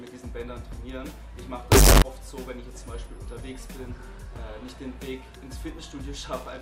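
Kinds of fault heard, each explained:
Float read as integer, 1.72 to 2.02 s: for about 0.3 s the sound turns abruptly into a very loud, harsh, almost square-edged waveform at an almost fixed, high level, with the background noise pushed up to the same level as the main sound, though its pitch stays traceable. This is likely 32-bit floating-point samples being read as 32-bit integers, so each sample's sign and exponent bits, not its actual level, set the output amplitude.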